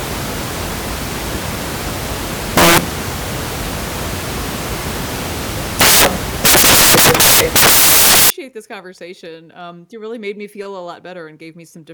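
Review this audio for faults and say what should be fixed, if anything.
The decoder assembled each sample from the wrong bytes from 0.0 to 8.30 s, whether through a one-byte offset, reversed byte order or a mismatched alignment assumption, so the rapidly changing low-order bits were treated as the most significant part of every value. The result is loud, harsh broadband noise across that whole stretch, and the clean speech returns with "this conversation". To prevent it, the reader's byte order, sample width and frame alignment should be checked against the stream's declared format before decoding begins.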